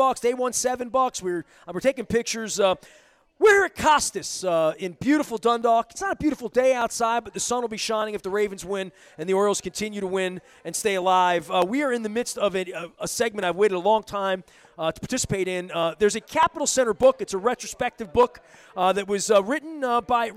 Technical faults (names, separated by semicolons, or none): clock drift buffer slips